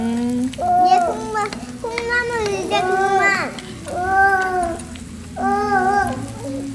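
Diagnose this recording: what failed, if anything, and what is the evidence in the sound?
Nothing failed: no stage from capture to playback leaves a mark on this recording of sounds, and there is no fault to diagnose.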